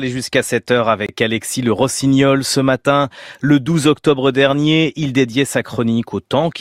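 A gap between stream segments appears at 1.06 to 1.09 s: the timestamps of two consecutive segments, which fit a segment length of about 6 s, fail to meet, so the player inserts about 24 ms of silence. The speech stops abruptly with hard edges, then resumes without any missing material.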